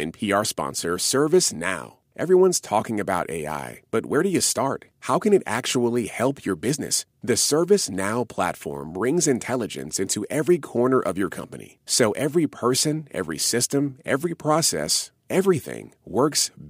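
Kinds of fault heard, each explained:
No technical fault can be heard anywhere in the speech recording, and the signal stays intact and continuous.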